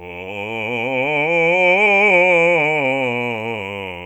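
Software likely stretched the music from 1.06 s through to the end to fill a longer slot, playing it at about 0.73 times its original pace while holding the pitch steady by repeating short slices of the waveform. This time-stretched section makes the pace drop abruptly at 1.06 s without any change in key, and the slowed passage drags.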